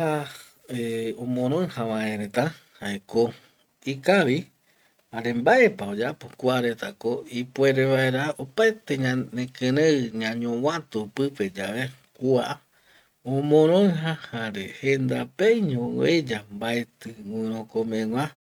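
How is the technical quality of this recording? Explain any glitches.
No glitches can be heard in this speech recording.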